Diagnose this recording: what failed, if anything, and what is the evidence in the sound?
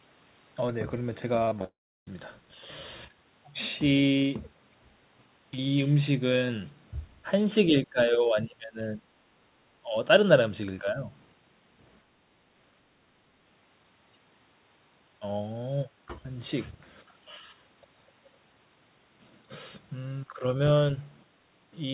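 Between 1.45 and 1.66 s the speech turns choppy, with six short holes, the longest 20 ms, patched over about 42% of that span. This is repeated packet loss (robotic sound) at the network stage: each missing packet is concealed by continuing the last sound.

From 1.66 to 2.08 s the audio smears into a fading buzz, then goes silent for about 0.33 s before speech resumes with that stretch missing. The likely cause is a long network dropout, where the receiver's concealment stretched the last sound until it ran out.

The talker's level dips by about 20 dB from 7.69 to 9.08 s, then by smaller amounts at 9.84 to 9.97 s (about 10 dB), 10.81 to 11.08 s, and 20.36 to 20.44 s (about 5 dB each). This is likely speech suppressed in double talk during call processing. The echo canceller mistook overlapping speech for echo and attenuated it. All of this sits inside G.711 telephone-band audio, with nothing above 4 kHz.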